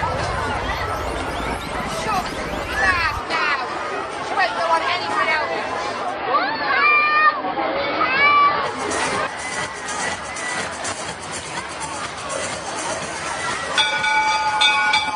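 Digital radio blending to analogue occurs from 5.99 s to 8.82 s. The receiver lost its digital stream and cross-faded, over about 200 ms, to the station's AM broadcast, then returned. During that stretch the sound is band-limited, so the top end goes dull. The level drops about 1 dB, and a faint hiss sits well below the programme, roughly 40 dB down, until the digital signal comes back.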